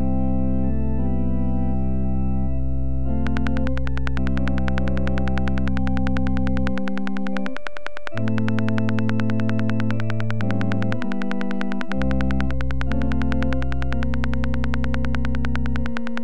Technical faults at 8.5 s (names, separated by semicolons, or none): train of clicks